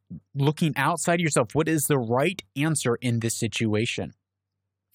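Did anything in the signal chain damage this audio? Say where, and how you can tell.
No, nothing in the signal chain damaged this audio.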